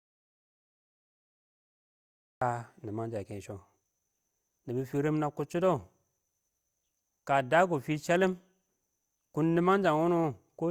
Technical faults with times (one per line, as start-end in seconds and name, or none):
0.00-2.41 audio dropout to silence